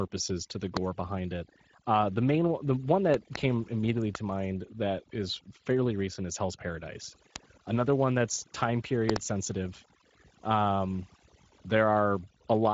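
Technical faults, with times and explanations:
Throughout: overdone noise removal. The background has been pushed down so far that what remains breaks into twinkling, warbling specks. Individual frequency bands near the estimated noise floor are being cut hard, and quieter parts of the speech go with them.
Throughout: Speex codec artefacts, plainly audible, at a rate that fits about 16.8 kbps. The low-bitrate CELP coding leaves too few bits for the excitation, so the speech sounds noisy and hoarse. Nothing remains above 7.7 kHz, the limit of the wideband coding.
0.77–0.79 s, 3.14–3.38 s, 4.15–4.17 s, 7.36–7.38 s, 9.10–9.18 s: loud pops, with two pops at 3.14–3.38 s and at 9.10–9.18 s and one at each of the others. They sit about 20 to 25 dB above the speech, which continues underneath. The likely cause is a voltage step or pulse, such as a plug, a switch, static or a driver glitch.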